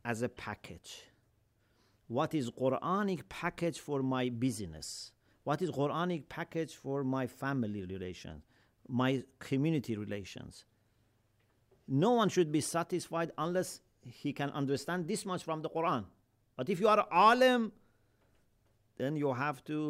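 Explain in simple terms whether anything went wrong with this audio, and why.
Nothing went wrong with this speech recording, and there is no moment where a technical fault can be heard. It sounds exactly as it was captured, with nothing breaking or interrupting it along the way.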